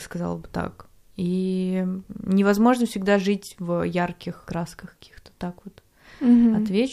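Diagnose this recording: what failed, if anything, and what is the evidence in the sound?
No faults detected in this recording.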